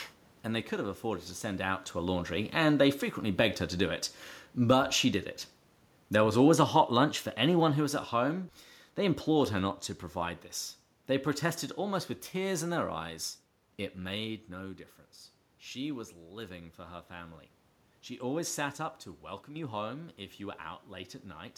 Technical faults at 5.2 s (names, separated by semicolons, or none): automatic gain falling